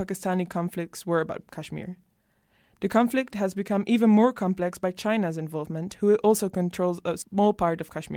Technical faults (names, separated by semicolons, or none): none